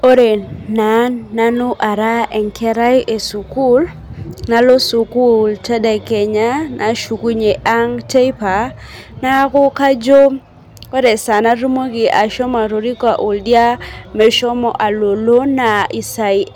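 Hard clipping runs through the whole speech clip: the signal is driven about 4 dB past what the chain can pass, so under one percent of samples, the loudest peaks, are sliced flat. That gives brief, gritty crackles on emphatic syllables, not the smoother, continuous warmth of soft saturation.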